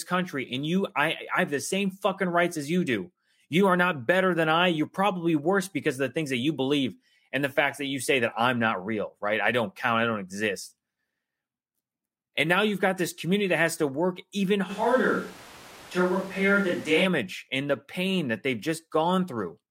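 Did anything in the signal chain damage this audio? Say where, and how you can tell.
Yes. After "has to work even", at 14.71 s, the speech abruptly turns roomy and hollow, with thinner bass. Level holds steady, but room noise rises to about 25 dB below speech. It snaps back at 17.05 s, before "and the pain that". This is likely a switch to a distant microphone at capture.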